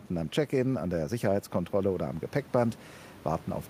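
No technical faults are audible in this recording.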